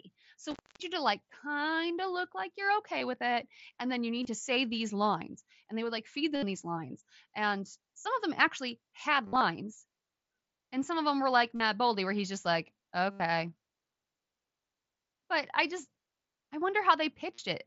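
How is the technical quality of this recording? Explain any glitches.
The recording has two kinds of fault: one early dropout from a bad connection and a series of short concealed gaps from the wireless headset link. The speech itself passes through the mSBC headset codec, which band-limits it to about 8 kHz.

Intermittent contact occurs from 0.51 to 0.83 s. A loose plug or cable opens for about 250 ms, so the speech cuts out, with crackle at each edge and only faint hiss between. On a waveform it appears as a near-flat gap bracketed by sharp spikes. A spectrogram shows a dark band edged by vertical broadband clicks.

Concealed Bluetooth headset packet loss occurs at 2.98, 4.23 (between "it and then you" and "to say these lines"), 6.36, 8.01, 9.26 to 9.41 (after "of them actually had"), 11.55 (between "of them were like" and "boldy where he's just"), 13.11 and 17.34 s. When audio packets go missing, the receiver fills the gap by repeating a recent stretch of waveform. 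The gaps run from about 22 ms to 98 ms, and the 9.26 s event is scattered over 150 ms. The short gaps are nearly hidden. The longer fills at 6.36, 9.26 and 13.11 s sound buzzy and held, with a slight warble as real speech resumes. A waveform shows periodic, copy-like cycles at steady level, and a spectrogram shows flat horizontal harmonic streaks in place of moving speech formants.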